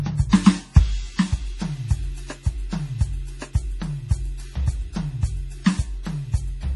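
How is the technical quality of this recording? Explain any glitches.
The technical quality is poor: heavy codec damage runs through the whole music clip, and one attack is smeared.

Throughout, nothing is present above 11.4 kHz, and the remaining treble sounds watery, with weak components flickering. This is likely heavy MP3 compression, consistent with a low bitrate around 32 kbps.

From 0.29 to 0.33 s, pre-echo puts about 37 ms of hiss ahead of an attack, because the codec spread its block's quantisation noise into the quiet moment before the onset.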